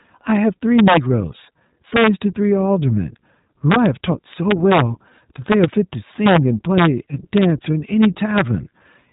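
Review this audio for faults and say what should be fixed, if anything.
iLBC codec damage runs throughout the recording, from start to finish. The speech is band-limited, with nothing above about 3.8 kHz, so it sounds narrowband and telephone-like, and it has a plainly audible rough, slightly synthetic texture. This comes from a low-rate VoIP coder that encodes each short frame's excitation independently rather than building on the previous frame, which fits iLBC in its 20 ms mode at around 15.2 kbps. To prevent it, capture or transmit with a wideband or full-band codec at adequate bitrate, or record locally without a narrowband VoIP stage.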